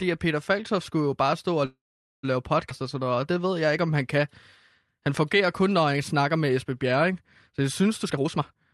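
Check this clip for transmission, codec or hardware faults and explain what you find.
Four network-timing faults are audible in this speech, all typical of a call's packet delivery.

Call audio freeze, 1.65 to 2.25 s, after "jo bare stå og": the last sound trails into about 0.44 s of silence, likely from packets held up until the jitter buffer ran dry. Speech then resumes intact, unlike a skip.

Skip ahead, 2.69 to 2.72 s, after "bare stå og lave": roughly 150 ms of speech is dropped and the two sides are joined almost directly, so material is lost rather than delayed.

Jitter buffer slow-down, 2.83 to 3.97 s: repeated pitch periods add 144 ms, so speech runs at 88% speed with the same pitch. It sounds drawn out rather than lowered.

Jitter buffer speed-up, 8.04 to 8.62 s, after "jeg synes": roughly 400 ms of short pitch-period pieces is removed, so speech runs at 163% speed. It sounds hurried but unbroken, unlike a skip.

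The top end rolls off near 12 kHz, which fits the Opus call path the audio passed through.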